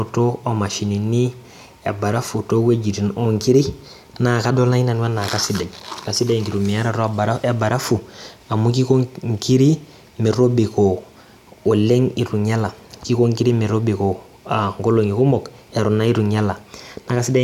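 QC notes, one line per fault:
No technical faults were found in the signal on listening.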